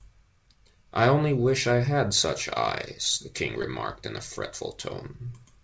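Around 3.62 to 3.65 s, just before "in a", there's short concealed packet loss: about 20 ms never arrived, and the receiver papered over it with a guessed continuation, leaving a quick smear.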